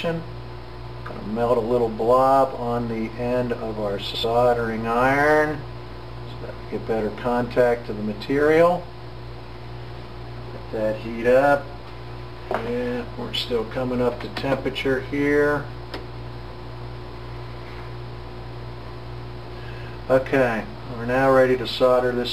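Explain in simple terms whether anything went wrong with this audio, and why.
Brief garbled flutters occur at 4.05–4.24 s, 8.99–9.18 s and 19.65–19.84 s. These are frames out of order: two neighbouring chunks of about 93 ms each were played back swapped, so nothing is missing, just scrambled.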